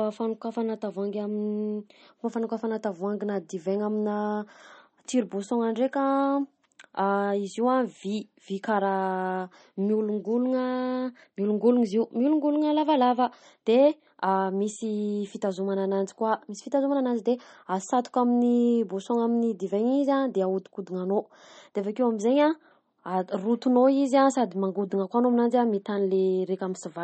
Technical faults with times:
0.00-27.03 MP3 compression

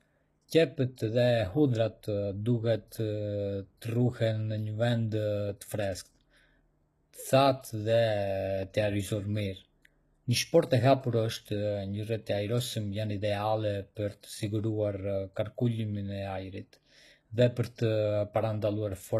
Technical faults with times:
0.00-19.20 HE-AAC compression

